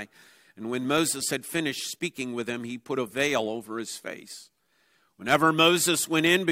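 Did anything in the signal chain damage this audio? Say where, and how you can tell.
No, nothing in the signal chain damaged this audio.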